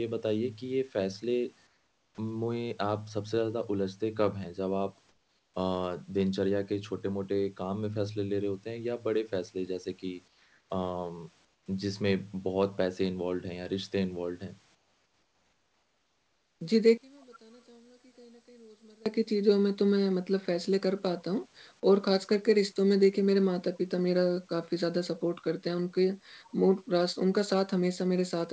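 Between 1.67 and 2.18 s, 5.09 and 5.54 s, 10.28 and 10.70 s, 11.45 and 11.66 s, and 14.75 and 16.61 s, the background in the pauses turns into a flat, featureless hiss about 4 to 8 dB quieter. This is comfort noise in place of the background, likely from discontinuous transmission.

From 16.98 to 19.06 s, the sound nearly disappears, falling about 31 dB to a faint residue. One channel is likely inverted, so the centred content cancels when the two channels are summed to mono.

At 17.21 to 17.36 s and again at 26.49 to 26.54 s, brief, very faint scraps of the speech return 443 ms after the original. This is an echo leak: likely a far-end loudspeaker's sound got past the echo canceller and was sent back. Throughout, the G.722 call path leaves nothing above 8 kHz.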